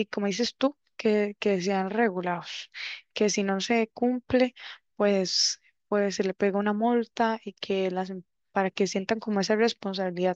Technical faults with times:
none

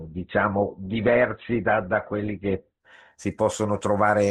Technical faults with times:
0.00-2.80 adaptive stream starting at a low bitrate

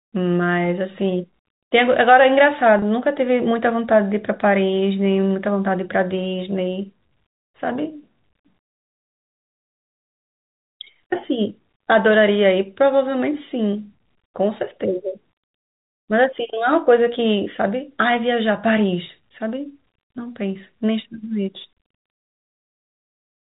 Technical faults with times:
2.79-2.82 packet loss with pitch repetition

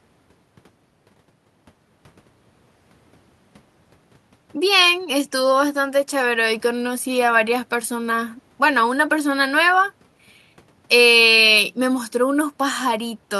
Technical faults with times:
none

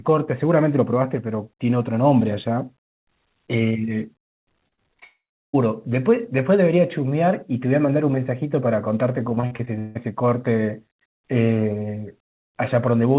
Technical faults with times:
4.68-5.04 repeated packet loss (robotic sound)
5.04-5.55 long network dropout
9.29-9.97 repeated packet loss (robotic sound)

